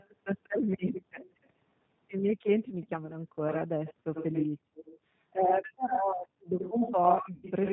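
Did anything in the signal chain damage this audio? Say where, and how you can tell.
Yes. Throughout, the speech sounds rough and synthetic with nothing above 4 kHz, the mark of the 8 kbit/s G.729 codec rebuilding it from coarse parametric data.

A delayed second copy trails the speech: faint at 0.0–0.11, 0.94–1.5 and 2.58–3.11 s (191 ms late), then nearly as loud at 3.48–4.47, 4.85–6.22 and 6.58–7.7 s (85 ms). This is likely an echo leak, a loudspeaker echo the far end's canceller missed.

From 7.34 to 7.47 s the sound smears into a fading buzzy tone or coloured noise. This is VoIP packet loss concealed by the speech codec: about 90 ms went missing, which fits three lost packets.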